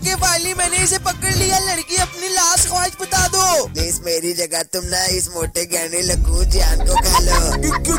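Hard clipping runs from start to end: the signal was driven about 9 dB past what a stage in the chain could pass, so its peaks were sliced flat, with a few percent of samples pinned at the limit. Those squared-off tops throw harmonics high into the spectrum, heard as a harsh, gritty fuzz on every loud moment. Unlike soft saturation, which rounds peaks into warmer distortion, this edge is abrupt and brittle, while quiet passages stay clean.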